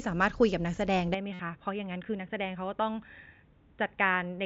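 At 1.14 s the speech suddenly goes dull and boxy and stays that way to the end. Nothing comes through above 3.8 kHz, the level sits around 5 dB lower, and a faint new noise floor appears well beneath the speech. There's no gap at the changeover. All of that points to an input switched to a poorer device, likely a headset dropping into its narrowband call profile or another mic taking over, each with its own tone and noise.

Shortly after, from 1.33 to 1.39 s, about 60 ms of audio is missing and patched over. That's concealed Bluetooth headset packet loss: several packets in a row never arrived, so the receiver kept repeating the best-matching slice of the last 20 ms or so. It comes out as a buzzy, steady tone held at full level, with a small warble as real speech returns. The mSBC link carrying it adds only light graininess of its own.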